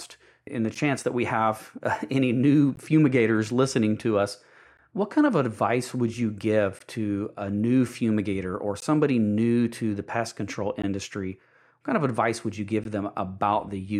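Gaps at a join of encoded pieces fall at 0.75, 2.76, 4.77, 6.79, 8.80, 10.82 and 12.84 s, one every 2 s. Pieces encoded separately were joined untrimmed, leaving start delay and end padding as brief silences, 11 ms then 16 ms, that cut the speech with softened edges before it resumes.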